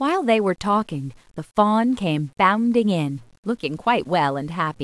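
Low bit depth without dither runs through the whole speech clip, with grainy distortion that shifts with the voice, about 40 dB below it. The likely cause is rounding to roughly 9 bits with no dither, so the error tracks the signal and turns quiet passages gritty.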